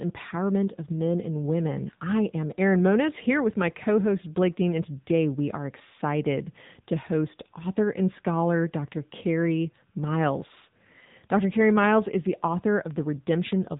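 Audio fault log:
Throughout, AMR narrowband mobile codec: speech is cut off above 3.8 kHz and sounds plainly buzzy and synthetic, which fits the low-rate 7.95 kbps AMR-NB mode.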